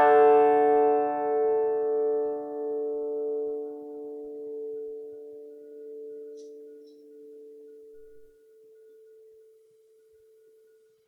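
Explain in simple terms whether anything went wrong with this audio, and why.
Nothing went wrong here; the music comes across just as it should, with no trouble anywhere to point to.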